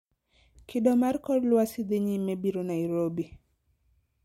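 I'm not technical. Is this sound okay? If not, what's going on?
Yes, the recording comes through without any technical problems that a listener would notice.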